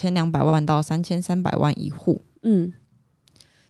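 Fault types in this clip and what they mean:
Short stall from a late packet: a packet arrived late, the jitter buffer emptied, and the receiver stretched the preceding sound by about 38 ms around 0.49 to 0.55 s before resuming where it left off, so nothing is lost but that moment of speech drags slightly.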